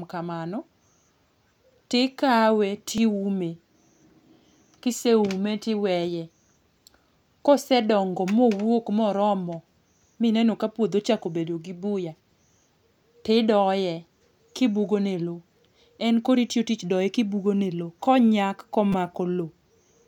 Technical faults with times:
2.98 repeated buffer
18.92 repeated buffer

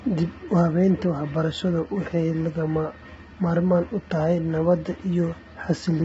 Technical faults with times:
0.00-6.04 low-delay AAC compression

